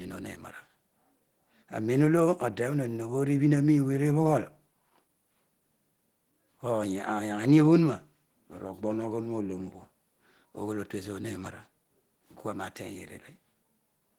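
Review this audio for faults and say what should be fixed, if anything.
Throughout the clip the speech sounds hoarse, rough and grainy, yet the top end stays intact, reaching about 20.2 kHz. The likely cause is Opus compression in hybrid mode, at a rate fitting about 16 kbps, too few bits to code each band cleanly. Encode at a higher Opus bitrate, or work from the uncompressed original.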